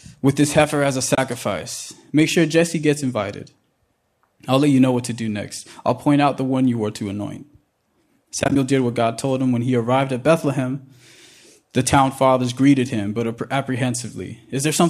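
At 1.15 to 1.18 s, just after "this heifer as a", there is AAC frame loss with muting: about 30 ms of speech drops to silence, and the overlapping decoder windows fade it out and back in, leaving a soft hole. A spectrogram shows a narrow blank vertical band with tapered edges. A second burst runs from 8.40 to 8.56 s, just before "did what". There, 80 ms of gaps are scattered across 160 ms, the longest run only about 20 ms. The waveform shows several short notches, and the spectrogram shows a comb of thin dark slices. The roughly 10 ms steps fit the short frames of a light low-delay AAC stream, likely AAC-ELD.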